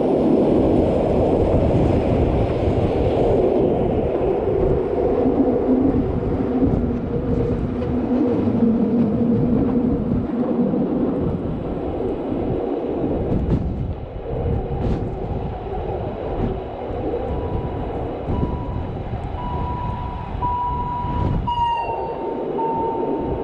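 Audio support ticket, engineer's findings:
Single sharp click at 17.01 s. Likely dropped samples: roughly one sample missing from the stream, far too brief to remove any audible content. Waveform steps abruptly from one value to a later one with no transition. Spectrogram shows one thin vertical line spanning all frequencies. Probable component: capture or buffer path losing a single sample, creating the discontinuity.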